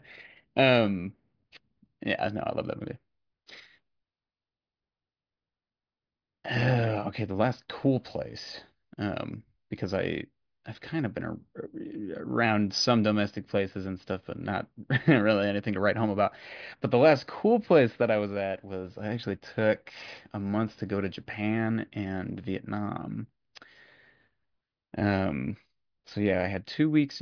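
No technical faults are audible anywhere in this speech.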